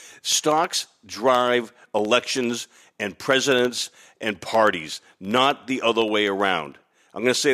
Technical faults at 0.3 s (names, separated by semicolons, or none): periodic USB or driver dropouts